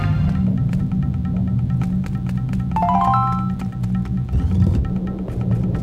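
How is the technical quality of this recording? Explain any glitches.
The recording has a clear technical fault. Mains buzz runs throughout: switching spikes twice per 60 Hz cycle leave a raspy hum roughly 30 dB down, seen as evenly stacked harmonic lines reaching several kHz.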